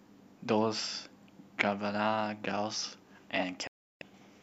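A digital broadcast dropout hits this speech clip from 3.67 to 4.02 s: the receiver lost valid frames and muted within about 3 ms, dropping roughly a third of a second.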